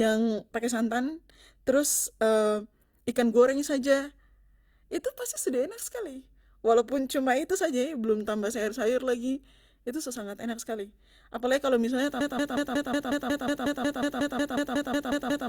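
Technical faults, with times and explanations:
12.21–15.49 s: broken-record loop. After "kalo misalnya", a 182 ms fragment of the speech repeats exactly, 18 times, until the end. A stalled player or stream likely kept resending its last buffer, losing the speech that should have followed.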